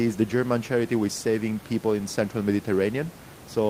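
The speech signal shows no technical faults anywhere in the clip, with only the recording room's own background noise audible at about 19 dB below the speech.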